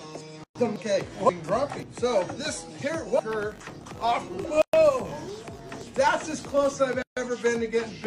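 A gap at a join of encoded pieces opens at 0.44 s and runs to 0.55 s, a silence of about 116 ms that cuts into continuous sound before it resumes exactly where it stopped. The pieces on either side were encoded separately and joined without trimming, so one run's padded final frame and the next run's start-up delay both remain as dead air. The codec softens the edges of the dropout.

From 3.28 s to 6.78 s, a filter restarted on every block adds a steady 50 Hz buzz, which fits blocks of about 20 ms. The filter discards its internal state at each block boundary and begins again from silence, producing a small transient every time. These ticks fuse into a buzz that grows louder and quieter with the level of the sound.

Inside that stretch, a second join gap silences 4.62 to 4.74 s (about 117 ms). A third, the longest at about 143 ms, follows from 7.02 to 7.17 s.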